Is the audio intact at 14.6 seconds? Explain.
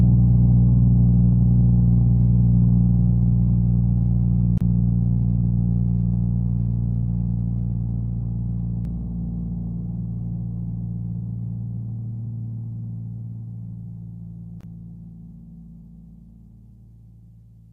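No. From 14.61 to 14.63 s the sound drops out for about 27 ms, a short hole with smeared edges, after which it resumes where it left off. This is a gap at a join of encoded pieces: the audio was encoded in separate chunks, here about every 10 s, and joined without trimming, so each chunk's start-up delay and end padding stay in as silence.

The same moment also carries a doubled audio track, present from 8.85 s to the end. A second, full-band copy of the sound trails roughly 0.3 s behind, about 5 dB quieter, with no decay or room colour. Two out-of-step copies mixed together, likely from a second, slower capture path or an edit, produce this.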